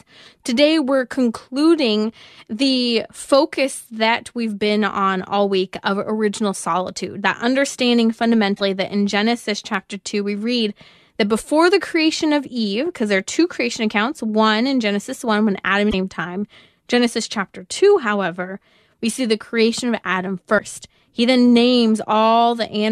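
Damaged data in the compressed stream makes the decoder misread frames, lose sync and hunt for the next header. The speech breaks up briefly at 8.53–8.61 s, after "original solitude that understanding" and before "that in", then at 15.87–15.94 s and 20.55–20.60 s.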